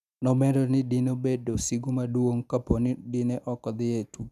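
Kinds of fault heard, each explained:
No technical faults can be heard in this speech clip. Nothing in the recording calls for a fault to be named or explained.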